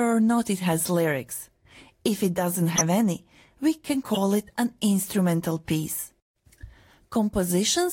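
Two short bursts of garbled noise cut through the speech, a loud blip from 2.75 to 2.82 s and a somewhat quieter one from 4.14 to 4.18 s. Both are corrupt frames that were decoded anyway. Flipped bits in the compressed data gave the decoder wrong gains and misread codes, so for a couple of frames each time it put strong energy at the wrong frequencies. The first burst peaks at around -5 dBFS.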